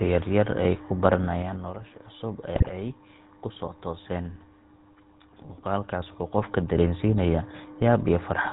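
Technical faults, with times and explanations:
Throughout: GSM full-rate codec. The speech has a buzzy, gravelly roughness and nothing above 4 kHz, which fits the 13 kbps full-rate coder rebuilding the voice from a vocal-tract model and a sparse pulse excitation. Unlike plain band-limiting, the rasp is built into the voice itself.
2.56 to 2.73 s: GSM bit errors. For about 0.17 s, just before "ay kusoo tooseen", the speech breaks into squawking and gargling with jumps in level. This points to corrupted filter, pitch and gain values, which fits roughly eight damaged frames, not a dropout or a click.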